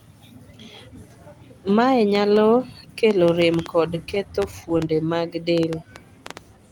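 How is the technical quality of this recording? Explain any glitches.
The recording has two faults. Both start after the first two seconds.

A train of clicks runs from 2.15 s to the end at 6.71 s. Sharp, similar pulses arrive irregularly, nearly four per second. They peak roughly 10 dB above the speech. The source is likely outside interference or a faulty connection or power supply. They tick over words and pauses alike.

Repeated stalls (stutter) occur between 3.97 s and 5.10 s. Audio packets arrived late, so playback kept running dry. The receiver stretched the last sound each time, with a dozen or so brief holds of up to 13 ms. Nothing is lost, but the speech catches and drags.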